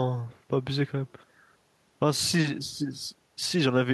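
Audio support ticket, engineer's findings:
No faults found in this speech recording. Nothing heard points to any failing component in the chain.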